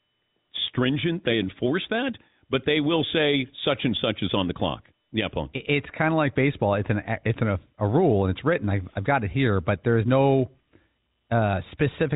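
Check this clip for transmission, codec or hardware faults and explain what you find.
Nothing here points to a transmission, codec or hardware fault; the band stops near 3.8 kHz, as expected of the telephone-grade G.711 coding this speech passed through.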